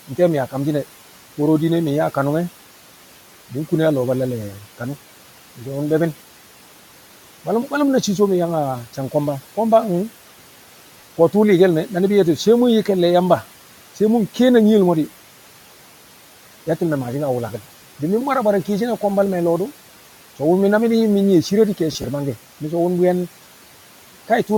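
Throughout the speech, the background hiss sinks in the pauses and swells back under each phrase, over room noise that sits about 19 dB below the voice. These are noise suppressor artifacts: a frame-by-frame gain reduction pulls what it judges steady noise down by about 12 dB.

From 11.01 to 11.03 s a brief grainy smear replaces the voice for 20 ms. From 21.92 to 22.04 s the sound turns noisy in several short patches spread over 120 ms, the longest around 30 ms, about 70 ms in total. Both are lost LE Audio frames. The LC3 decoder refilled the gaps with the last spectrum under randomised signs, which turns tonal detail into hiss. The first gap fits two 10 ms frames.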